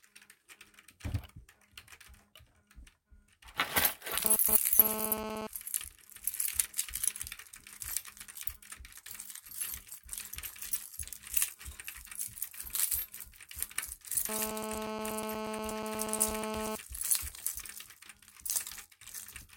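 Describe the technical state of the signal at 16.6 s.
At 16.6 s the sound carries GSM phone buzz, running from 14.29 s to 16.76 s at about 4 dB below the signal. A nearby 2G handset on a call transmits in bursts about 217 times a second, and the audio circuitry rectifies those radio pulses into a hard, raspy buzz with many harmonics. Unlike mains hum, which is smoother and sits at 50 or 60 Hz, this buzz is pitched at 217 Hz and stays nearly steady.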